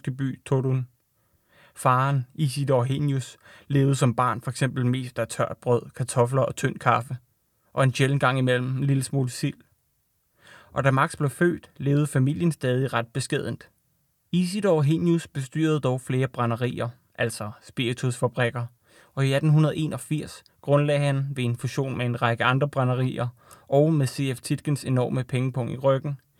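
Speech recording; no technical faults can be heard anywhere.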